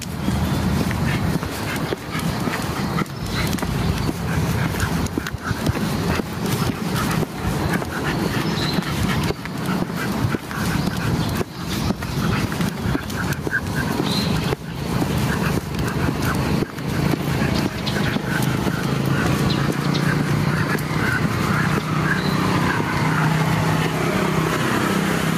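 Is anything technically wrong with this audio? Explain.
Yes. Gain pumping runs throughout the clip, with the level swinging by roughly 15 dB. The likely cause is an input gain set far too high, with a fast limiter or compressor clamping down on each peak and releasing between them. Loud and quiet passages sit unnaturally close in level, leaving the sound squashed and breathing.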